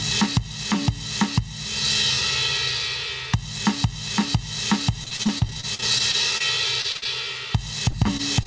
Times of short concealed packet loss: 7.91-8.47

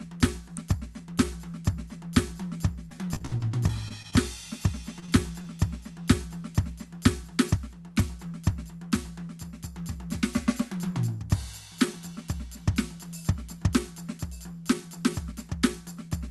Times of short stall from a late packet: 5.00-5.04

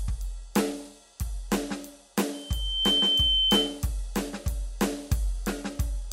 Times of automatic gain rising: none

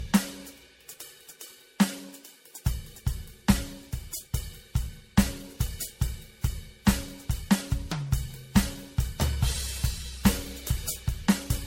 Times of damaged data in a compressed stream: none

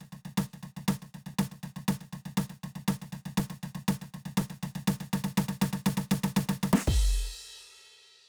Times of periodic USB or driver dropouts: 1.34-7.48

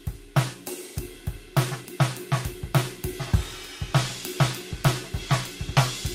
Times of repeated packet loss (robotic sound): none

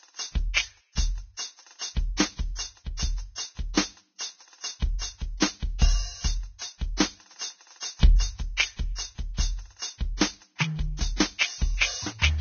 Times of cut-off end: none

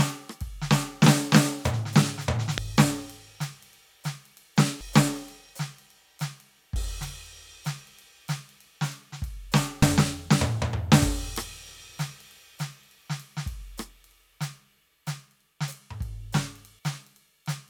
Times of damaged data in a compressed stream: 2.58, 4.81, 6.76, 9.82

